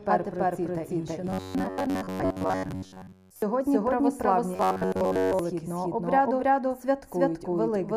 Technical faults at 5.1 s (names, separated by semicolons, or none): doubled audio track; robotic sound from repeated short buffers